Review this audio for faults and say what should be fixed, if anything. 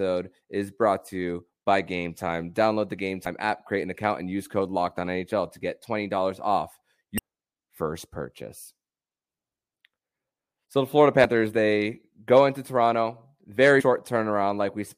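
Damaged data in the compressed stream produces short glitches in the speech at 3.25, 7.18 and 11.24 s and from 13.79 to 13.82 s, where the decoder misreads corrupted frames and loses sync. Checksum-verify the file and re-transfer or re-encode from a clean source.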